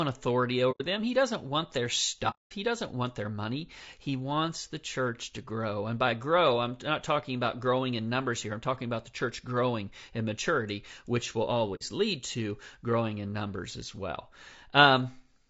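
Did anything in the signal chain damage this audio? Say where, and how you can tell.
Yes. At the codec stage, the whole clip carries low-delay AAC compression, likely AAC-ELD at a low rate, which fits around 32 kbps. The speech sounds rough and grainy, with noise filling between harmonics and a thin, synthetic top band, because the low bitrate forces coarse quantization.

In transmission, AAC frame loss with muting leaves soft-edged holes at 0.71 to 0.82 s, at 2.30 to 2.53 s after "doesn't want their", and at 11.75 to 11.82 s between "in maturity which will" and "lead to growing in". Those lost frames were decoded as silence, so the overlapping windows fade the sound out and back in over about a frame, leaving holes of 90, 210 and 60 ms respectively.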